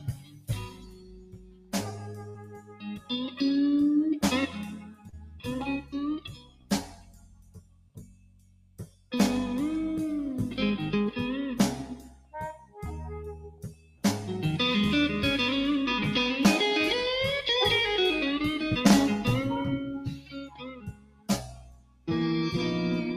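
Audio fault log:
throughout: noise suppressor applied to music or sounds. A speech-tuned suppressor keeps treating sustained, non-speech content as noise and pulls it down, with gain swinging by roughly 20 dB. Onsets survive while held material and decays sink, so the level pumps and the texture thins.
0.00–1.75 s, 1.91–3.11 s, 4.47–5.47 s, 6.21–9.12 s, 11.91–12.34 s, 12.53–12.78 s, 13.34–14.04 s and 20.06–22.08 s: sound cut by the noise suppressor. In these stretches the steady or fading parts are pushed down by about 14 to 17 dB, deepest at about 17 dB, so tails collapse early and sustained sound dips audibly while sharper attacks stay present.
2.29–2.39 s: burst of packet loss. About 40 ms of audio failed to arrive, and the receiver extended the last sound for roughly 48 ms while fading it, giving a held buzz or hiss. Playback then picks up about 10 ms further on, leaving a small skip.
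5.09–5.15 s: short concealed packet loss. Some 40 ms went missing and was patched with about 33 ms of synthesized continuation before blending back into the real signal. It comes across as a brief smear or wobble inside an already suppressed passage.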